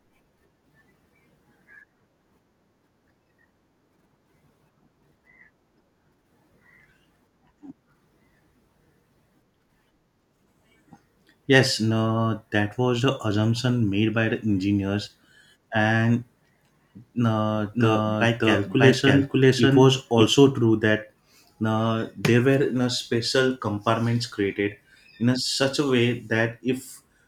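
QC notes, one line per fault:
17.55–20.23 s, doubled audio track: the speech is joined by a second copy of itself trailing roughly 0.7 s behind and at about the same loudness, so phrases land twice and smear into each other. The copy has the original's full bandwidth, with no room colour and no decay tail, and it cuts in and out abruptly at both edges. This is likely a second capture through a slower path, or an edit leaving two offset copies overlapping.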